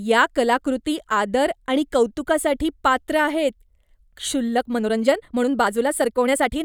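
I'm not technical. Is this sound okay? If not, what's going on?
No. From 4.53 s to the end, the speech suddenly runs about 1.41 times faster, but the pitch stays the same. That's a time-stretched section. Software likely squeezed it to fit a set length by dropping tiny pieces, so it sounds rushed.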